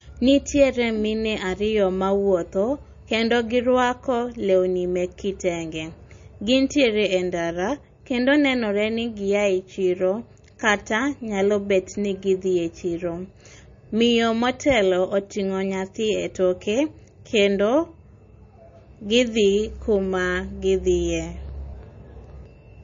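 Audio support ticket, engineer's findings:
Speech dull and band-limited throughout, nothing above 7.2 kHz. Watery, swirling texture, metallic chirps on s sounds, smeared attacks. Likely MP3 compression: starved encoder cutting treble and zeroing weak frequency lines frame to frame, consistent with roughly 32 kbps.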